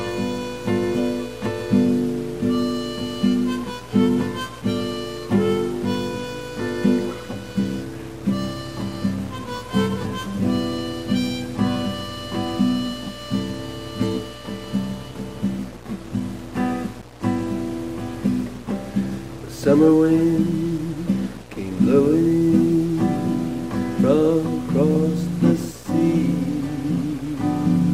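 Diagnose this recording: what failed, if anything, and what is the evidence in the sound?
Nothing failed here; there's no point in the recording where a stage in the chain can be heard giving way, so there's no evidence of a fault to point to.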